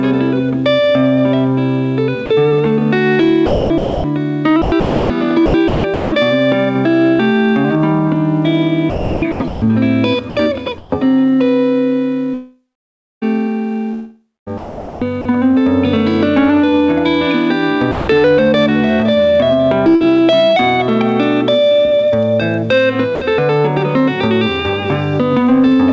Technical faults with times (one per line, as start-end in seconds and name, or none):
2.26-2.30 sound dropped by the voice detector
3.46-6.12 sound chopped by the voice detector
8.90-10.92 sound chopped by the voice detector
12.34-15.25 sound chopped by the voice detector
17.91-18.07 sound dropped by the voice detector
19.95-20.06 burst of packet loss
23.15-23.21 sound dropped by the voice detector